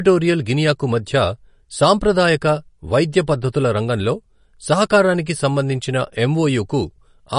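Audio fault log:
Throughout, MP3 compression: a likely low-bitrate encode, fitting about 40 kbps, starves weak frequency lines, so speech sounds plainly watery and nothing above 10.6 kHz remains.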